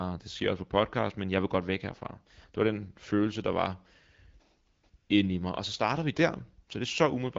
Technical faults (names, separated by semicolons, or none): AMR comfort noise